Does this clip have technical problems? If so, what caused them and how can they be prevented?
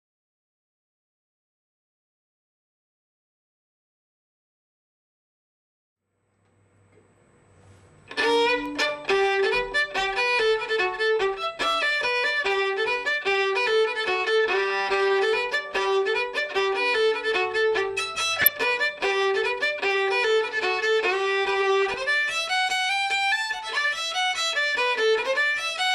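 Yes. Throughout, the sound is dull, with a gurgling, granular texture and upper frequencies flickering in and out. This is likely MP2 compression at a low bitrate, which fits about 80 kbps, where sparse bits switch off upper sub-bands. A spectrogram shows a ragged top edge with blocky patches blinking on and off. Encoding at a higher bitrate, or with a more efficient codec, prevents it.

DAB burbling appears at 14.58–14.87 s, 18.40–18.57 s and 21.82–21.94 s. Bit errors slipping past error correction corrupt samples, putting short blips of noise in single sub-bands, and scale factors, making sub-bands jump in level for up to a frame. A spectrogram shows bright horizontal blotches, and the waveform shows brief bursts. Better reception or stronger error protection prevents it.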